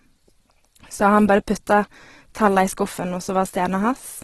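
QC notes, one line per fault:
throughout: Opus compression, grainy, rough speech with nothing above 12.1 kHz; likely heavy Opus music-mode coding near 12 kbps, filling starved bands with noise.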